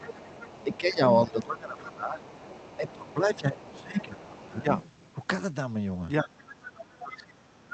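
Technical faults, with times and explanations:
0.0–5.27 s and 6.35–7.19 s: other side's voice leaking through. A second, faint voice sits behind the talker. It is roughly 25 dB down at first and nearer 20 dB down later. It likely comes from the loudspeaker reaching the microphone and getting past echo cancellation.
0.1–2.24 s, 2.77–4.72 s and 6.21–7.73 s: speech suppressed in double talk. The talker's level dips while the leaked voice is present. It drops by around 15 dB over about 1.5 s in each early span, and by around 30 dB at the end. The echo canceller likely turned both sides down together.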